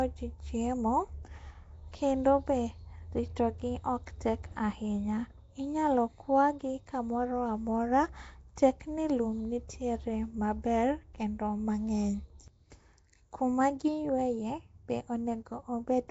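A low-rate block codec, likely Nellymoser compression of the kind Flash used for microphone input, has coded the speech from start to finish. It works in short fixed blocks with very few bits per sample, gives weak bands no bits at all, and patches them with noise. The damage is plainly audible: a rough, hissy halo around the speech, a smeared underwater quality, and nothing above 7.7 kHz, which fits a 32 kbps stream.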